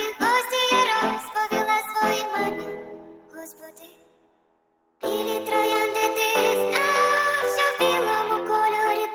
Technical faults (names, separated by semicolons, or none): noise suppressor applied to music or sounds; sound cut by the noise suppressor